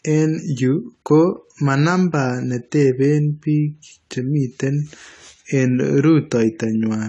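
Speech, dull and smeared throughout, with nothing above 11.5 kHz and plainly audible codec texture, likely AAC compression at a low bitrate, something like 32 kbps.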